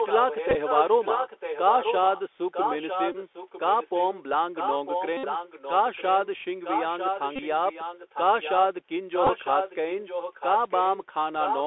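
Throughout, the call runs over the Bluetooth CVSD headset codec, a one-bit delta coder whose adaptive step cannot track loud, fast high sounds. The sound is squeezed into a narrow 300 Hz to 3.5 kHz band, which points to the 64 kbps headset link, and carries scratchy sibilants and a granular hiss.

An echo leak appears from 0.00 to 4.21 s, 4.54 to 6.27 s, 6.63 to 8.56 s and 9.12 to 11.06 s, likely a far-end loudspeaker whose echo canceller let its own pickup back through. A copy trails the speech by about 0.95 s, only roughly 5 dB quieter.

A Bluetooth headset packet repeated fault hits at 0.50 to 0.56 s, 3.12 to 3.16 s, 5.17 to 5.24 s, 7.36 to 7.42 s and 9.25 to 9.30 s. Lost packets were filled by re-decoding old bits, giving a short buzz near 267 Hz. It is longest and steadiest around 5.2 s, where about 64 ms went missing.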